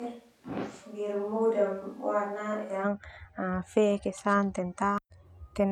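Until 2.83 s the speech is roomy, hollow and bass-light, about 5 dB quieter with more room noise: likely a switch to a distant microphone.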